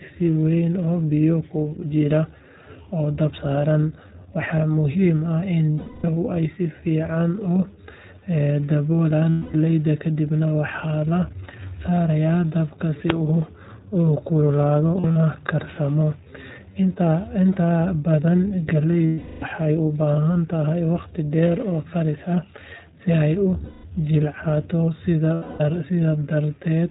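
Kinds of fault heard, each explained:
iLBC codec: the speech was squeezed through a narrowband VoIP codec, so everything above 4 kHz is gone, leaving a plainly rough, slightly synthetic voice throughout.
Lost iLBC frames: packets went missing six times, and the decoder filled each gap with a repeated pitch cycle, heard as a held, buzzy vowel lasting up to about 0.36 s.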